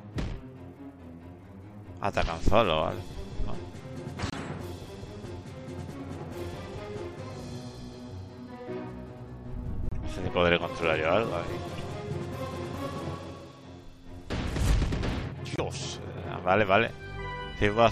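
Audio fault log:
4.30–4.39 s, corrupt frame decoded: about two damaged frames played as a short burst of misplaced energy, near -20 dBFS, because the decoder used flipped bits as wrong gains and codes.
9.89–9.93 s, corrupt frame decoded: a brief blip over about three frames, again near -20 dBFS.
11.78 s, corrupt frame decoded: a tiny tick, much quieter, around -40 dBFS.
15.51–15.60 s, corrupt frame decoded: the loudest burst, about four frames, near -15 dBFS.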